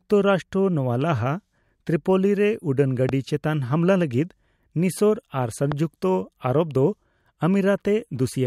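A speech clip with two loud pops sitting on top of it, at 3.09–3.11 s and again at 5.72–5.74 s, each a single sharp hit lasting a couple of hundredths of a second. The first jumps roughly 10 dB above the speech, the second closer to 15 dB, while the talking carries straight on underneath. That's the signature of a likely electrical transient, from something like a connector, switch or static discharge, punched into the signal path.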